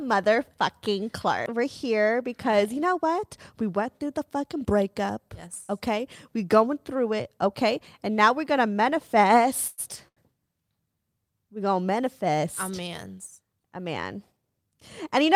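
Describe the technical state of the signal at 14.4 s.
At 14.4 s the speech is inside a jitter buffer speed-up running from 14.04 to 14.59 s. The receiver trimmed an overfull buffer by cutting pieces of one or a few pitch periods repeatedly, about 70 ms in all, so playback runs at 112% with unchanged pitch and sounds hurried. On a spectrogram the harmonics stay level while syllables crowd closer together, and the waveform shows periods spliced out.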